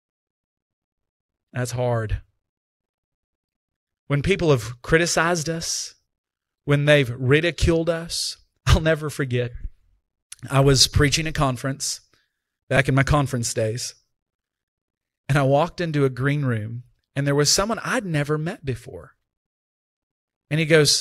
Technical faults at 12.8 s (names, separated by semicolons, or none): repeated buffer